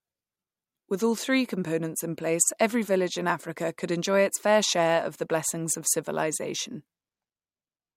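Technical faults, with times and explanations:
4.82 to 7.96 s, sample clock jitter: from just after "could enjoy its fair" to the end, a gritty hiss clings to the speech. The converter's clock wanders by a few microseconds, so each sample lands slightly off time, and the error grows with how fast the waveform moves. It sits roughly 25 dB below the speech, loudest on sibilants and strong syllables, and it drops out in the gaps. A steady noise floor would stay put there.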